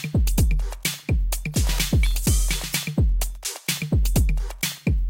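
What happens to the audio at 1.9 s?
Nothing goes wrong at 1.9 s; the sound carries on intact through that moment, with no dropout, click or distortion.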